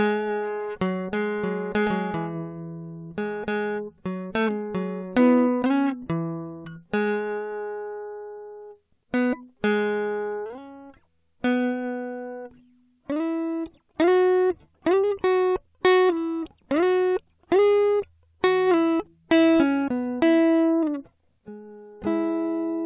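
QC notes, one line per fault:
Nothing stood out on listening to the music in this clip.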